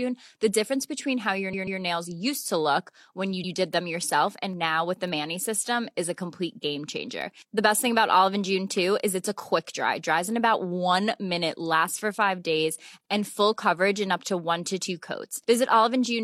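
Speech, and it has two kinds of fault. The first is repeated frames. At 1.49 to 1.77 s, between "difference between how your" and "nails used to look", a 139.3 ms chunk plays twice more, which fits a run of three compressed frames being written again. That adds about 278.6 ms and gives a stutter. Shorter ones follow: a 92.9 ms block plays one extra time at 3.39 to 3.49 s, and a 46.4 ms block repeats at 13.01 to 13.05 s, after "lasts for five days" and before "and full coverage in". The second is bit error spikes, which are single sharp broadband ticks at 3.74 s, at 5.08 s just after "and now with the", and at 7.22 s. Each has nothing to do with the speech. It's a flipped bit making the sample value jump by a power of two and snap straight back. The first two sound like one bad sample, and the one at 7.22 s points to about three in a row.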